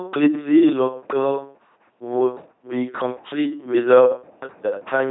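From start to finish, the speech carries heavy LPC-10 vocoder damage. The sound points to a bitrate near 2.4 kbit/s. Each moment is rebuilt from a short all-pole filter fed by either a pulse train or noise. Nothing in between is allowed. The result is a flat, buzzing robot voice. Voicing errors add buzz on hiss-like sounds and hiss on voiced ones. Nothing is present above 3.9 kHz, so the top end sounds dull.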